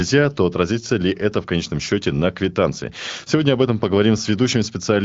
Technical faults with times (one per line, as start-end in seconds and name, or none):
none